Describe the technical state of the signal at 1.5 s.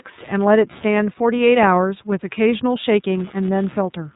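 At 1.5 s the speech carries computer activity noise throughout, a faint buzz pulsing around 150 times per second, roughly 30 dB under the signal, from processor load shifting the shared ground. On a spectrogram it shows as fine vertical striations. The iLBC codec also acts across the whole clip: everything above 4 kHz is cut, and the 30 ms frames sound plainly rough and synthetic, which points to the 13.33 kbps mode. The spectrogram is empty above 4 kHz.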